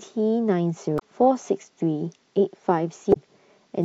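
At 0.96 to 1.02 s and again at 3.10 to 3.17 s, the speech breaks into a short blip. Each comes from damaged data in a compressed stream. Corrupted bytes make the decoder misread frames and lose sync until it finds the next frame header.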